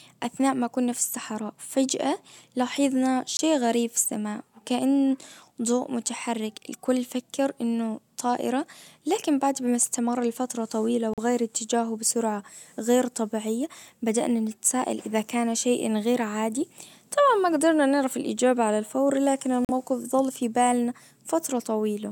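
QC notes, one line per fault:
3.37–3.40 s, 11.14–11.20 s, 19.65–19.71 s: Bluetooth dropout, likely from wireless packets arriving too late and being discarded. The speech cuts to silence for about 21 ms, then twice for about 43 ms, lengths that fit one and two lost audio frames. Unlike a buffer underrun, where playback stalls and resumes where it stopped, here the speech comes back further along, as if it had kept playing through the gap.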